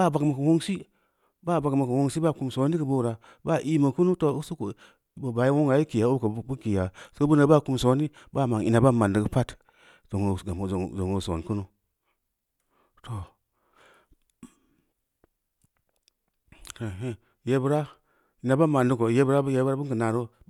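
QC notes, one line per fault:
No faults heard on the speech at any point.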